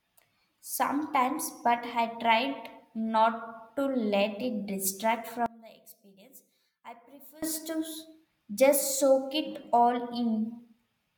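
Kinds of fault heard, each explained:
One channel inverted: after "to let it distract" the level drops about 22 dB, likely a reversed channel cancelling in mono; the waveform shrinks and the spectrogram fades.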